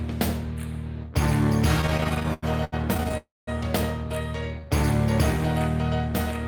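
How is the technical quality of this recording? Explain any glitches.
The recording has two glitches, one right after the other in the middle.

From 1.81 to 3.15 s there's a run of repeated stalls (stutter). Nineteen short gaps, the longest about 89 ms, pad out roughly 28 percent of that stretch. Packets kept arriving late, so the jitter buffer kept running dry and the receiver stretched the last sound each time. Nothing's lost, but it drags and stutters.

At 3.17 s, right after that, comes a call audio freeze lasting about 0.3 s until 3.49 s. The last sound is held briefly, then fades, and around 0.2 s of it is plain silence before the audio picks up exactly where it left off. That's likely a network hold-up emptying the jitter buffer completely.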